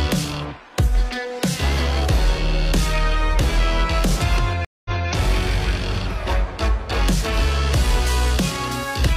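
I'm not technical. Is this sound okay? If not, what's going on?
No. There is a stream reconnect between 4.65 and 5.08 s. The connection dropped, and the sound cuts out for about 0.2 s. When it comes back, it restarts about 0.23 s earlier than where it stopped, so a short stretch repeats.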